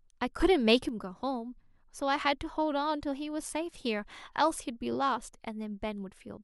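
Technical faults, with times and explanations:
0.40 to 0.89 s, sudden gain jump: the speech and background noise leap up together by about 6 dB, likely a gain setting applied instantly without any ramp.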